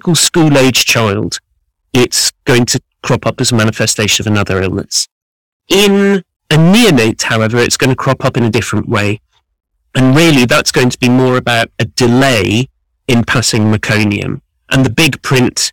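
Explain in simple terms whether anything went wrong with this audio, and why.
Something in the recording chain was fed a signal far louder than it could handle, from start to finish. Whenever the speech got loud, the tops of the sound wave were sliced off flat. This is called hard clipping, and here it is heavy, with roughly one moment in seven cut off. Those flattened peaks add harsh, buzzy overtones, so every louder syllable comes out fuzzy and crackly instead of clean.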